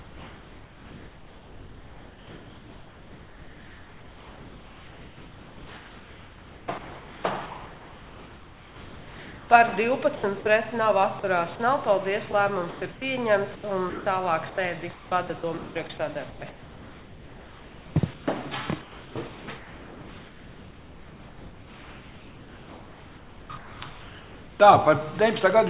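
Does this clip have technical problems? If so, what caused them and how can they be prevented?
Yes. Comfort noise in place of the background runs from 0 to 9.5 s and again from 18.8 to 24.6 s. The cause is likely discontinuous transmission, where the sender stopped transmitting during what it judged to be silence and the receiver generated synthetic noise instead. The real background, with its detail, gives way to a flat, featureless hiss for about 9.2 s and then about 5.4 s. Keeping DTX switched off on the sender prevents this.

The sound chopped by the voice detector appears at 10.16–10.46 s, 11.20–11.60 s, 12.32–13.02 s and 13.56–18.28 s. Here the detector likely toggled between sending and muting, so short pieces were filled with comfort noise: 0.14 s, 0.08 s, 0.24 s and about 2.5 s of the longest stretch. The sound turns choppy. Lowering the detector's aggressiveness or adding hangover time avoids this.

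The sound dropped by the voice detector comes at 19.28–19.48 s. The detector likely took quiet sound for background and cut it, losing about 0.1 s of it under 0.2 s of steady noise before transmission resumed. The whole clip has nothing above 4 kHz, which fits a narrowband G.711-style call link. Setting a less aggressive detection threshold prevents this.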